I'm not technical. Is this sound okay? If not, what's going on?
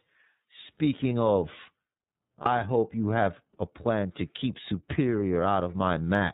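No. The iLBC codec is at work for the whole recording. It's a phone-call codec that keeps only the lower part of the sound, nothing above 4 kHz, so the speech is muffled and narrow, like a phone line. It rebuilds each short chunk of sound separately and approximately, which gives the speech a plainly audible rough, slightly synthetic edge.

Lost iLBC frames occur at 2.42 to 2.46 s. One chunk of sound, likely a single 30 ms frame, never arrived. The decoder filled the gap by repeating the last bit of sound mixed with noise, so you hear a brief held, buzzy smear. Because each chunk decodes on its own, the speech comes back right away.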